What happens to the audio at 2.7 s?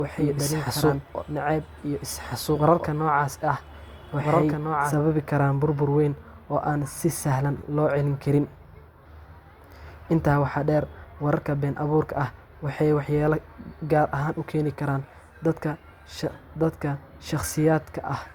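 At 2.7 s, the speech is heard twice. This doubled audio track is already running when the clip begins and ends abruptly at 4.94 s. A full-band copy trails about one and a half seconds behind, a few decibels quieter, with no decay or room colour. It is likely a second capture path or an out-of-step edit.

Underneath, this is low-bitrate audio saved at a high bitrate. The earlier encoding's artefacts are still there. The sound points to likely Opus at around 48 kbit/s, later saved as a 256 kbit/s MP3 that cannot restore the lost detail.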